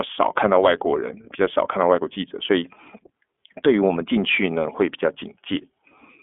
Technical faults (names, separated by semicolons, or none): iLBC codec